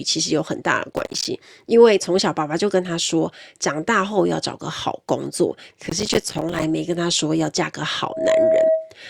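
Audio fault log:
0.97–1.25 s and 5.87–6.64 s, processor overload crackle: the processor misses dozens of buffer deadlines of around 5 ms each, leaving tiny silent gaps that sound like gritty crackle over the speech.
8.03–8.96 s, loudspeaker feedback squeal: the microphone picks up its own loudspeaker and the loop runs away at 642 Hz, a tone that swells within a fraction of a second to sit above the speech.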